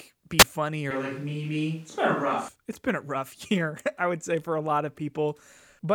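At 0.38 s to 0.44 s there is a wireless microphone squelch dropout: the FM radio link fades, hiss rises, and the receiver's squelch mutes the output for a vanishingly brief instant. That hiss-then-hole pattern separates it from an ordinary cable crackle or digital gap.

From 0.91 s to 2.48 s the speech turns hollow and roomy, thin in the bass, with faint background noise roughly 35 dB under it. This is a switch to a distant microphone, likely because the close microphone's signal failed. The level barely changes, so it is the sudden shift in tone, not a drop in loudness, that gives it away. The switch comes just before "it's been a rough".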